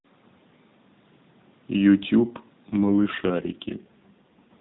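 From 2.68 s to 4.61 s the speech turns rougher and more synthetic, with no gap or narrowing, which fits an AMR rate drop from 12.2 to 5.9 kbps.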